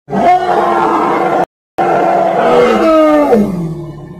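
At 1.44 s the sound cuts out dead and stays silent until 1.78 s, a gap of about 0.35 s. That's a playback stall. The output simply stops mid-flow rather than fading, then picks up again once the player gets going. The likely cause is the player running dry of buffered data, or its audio thread getting blocked for a moment, so nothing reached the output until it recovered.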